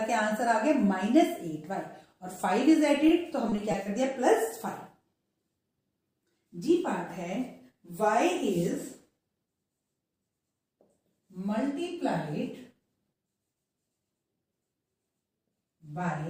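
Audio with repeated packet loss (robotic sound) from 3.50 to 3.88 s. Four short gaps, none over 20 ms, are patched by repeating earlier sound. This gives a brief choppy stretch.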